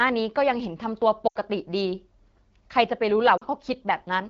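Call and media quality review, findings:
Lost AMR speech frames, 1.28–1.36 s: speech smears and thins for about 90 ms, which fits four consecutive 20 ms frames failing checksum. The decoder conceals them by repeating the last good pitch and vocal tract parameters with falling gain. Lost AMR speech frames, 3.37–3.44 s: a shorter dip and warble of about 60 ms, which fits two lost frames, concealed the same way. Both sit on the AMR wideband (HD Voice) path, whose light coding texture fits a 12.65 kbit/s mode.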